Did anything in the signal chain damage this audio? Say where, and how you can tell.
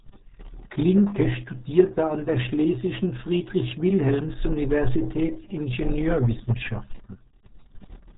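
Yes, at the codec stage: the RealAudio 14.4 codec removes everything above 3.8 kHz throughout and adds a gargly smear, fitting an 8 kbit/s stream, which a plain low-pass filter wouldn't.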